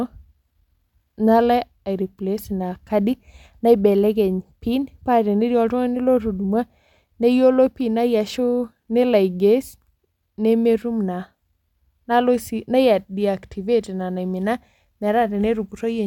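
Nothing goes wrong anywhere in this speech recording; there's simply no technical fault to point to at any moment.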